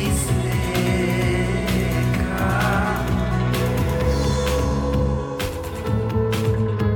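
No technical fault can be heard anywhere in this music. There is nothing to point to at any moment.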